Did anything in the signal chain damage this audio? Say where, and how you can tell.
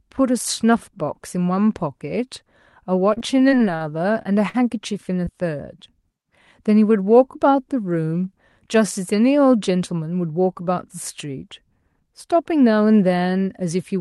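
Yes. The damage happened on the network. From 3.13 to 3.82 s the speech turns choppy. Six separate gaps, the longest 37 ms, were each covered by extending the previous sound, so about a fifth of that stretch is synthetic filler. This is repeated packet loss.

Short concealed packet loss is audible as brief smears at 4.22–4.27 s and 5.25–5.29 s. In each case about 20 ms of audio never arrived in time. The decoder extrapolated from the preceding sound and then crossfaded back into the real signal, which leaves a small wobble.

A burst of packet loss at 4.49–4.56 s removes about 40 ms of speech. The receiver filled the gap by holding and fading the last sound before the audio resumed further on. The Opus coding itself, with its roughly 12 kHz bandwidth ceiling, did not cause these faults.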